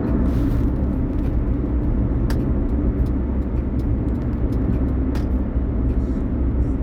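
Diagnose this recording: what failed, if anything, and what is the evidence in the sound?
Nothing stood out on listening to this recording that would point to a failure at any stage of the chain.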